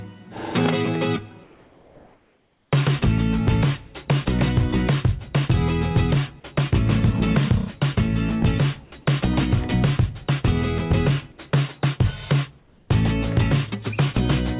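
Comfort noise in place of the background appears from 1.44 to 2.72 s and again from 12.58 to 12.9 s. In both pauses the real background, which sits about 36 to 38 dB below the loudest sound, gives way to a steady, featureless hiss about 3 dB and then about 4 dB quieter. This is likely discontinuous transmission: the sender stopped sending during silence and the receiver synthesised shaped noise, band-limited below 4 kHz like the rest of the call audio.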